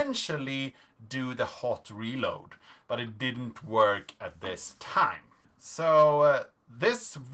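Nothing goes wrong anywhere in the clip, and the audio simply carries the usual character of a call, with the top end stopping around 8 kHz from the microphone processing and the Opus call path, whose coding fits a bitrate of roughly 20 kbps.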